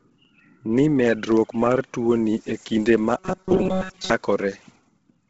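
Heavy low-bitrate coding, likely Bluetooth LC3 compression, runs throughout: the speech is cut off above 7.7 kHz and has a breathy, grainy edge, which points to roughly 16 kbps in 10 ms frames.

At 1.32 to 1.39 s, just before "mar tuoni e kinde", a loud pop sounds as two sharp clicks, roughly 10 dB above the speech. A likely cause is a voltage spike from a switch or driver glitch, and the speech continues underneath.

From 3.17 to 4.11 s, right after "tuoni e kinde ma", there is robotic sound from repeated short buffers. Audio likely arrived too seldom, so about 5 ms segments were replayed in place of most of the real signal. This imposes a metallic 188 Hz buzz that only loosely tracks the speech.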